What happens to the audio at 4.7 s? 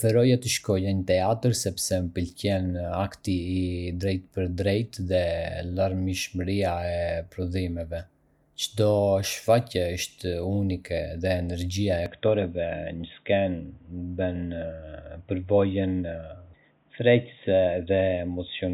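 Nothing goes wrong at 4.7 s: the speech runs through that moment intact, with no dropout, click, distortion or other audible fault.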